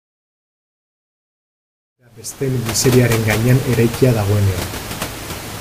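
Nothing stood out on listening to this speech clip, beyond the room's own background noise sitting about 13 dB below the speech and a smooth fade-in that finishes at 3.19 s.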